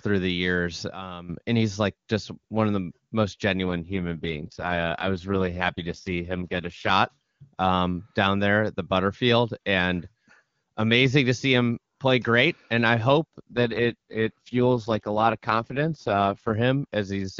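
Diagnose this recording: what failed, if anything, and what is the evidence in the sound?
A sudden gain jump runs from 0.92 to 1.29 s, right after "through the years". The level steps down by about 12 dB and then steps back up before "and he's like just". Speech and background noise drop together. Both edges are abrupt, with no fade. The likely cause is a digital gain change applied without a ramp, in call processing or the driver stage.

An AMR rate drop occurs twice, at the network and codec stage. The first runs from 3.64 to 6.90 s, starting after "one of the most". The second runs from 13.52 to 16.54 s, after "great and I hope". In both, the AMR-WB stream falls from its clean 23.85 kbit/s to 6.6 kbit/s. The voice turns raspy and synthetic. The bandwidth stays the same and nothing drops out. This points to the radio link forcing the lowest rate.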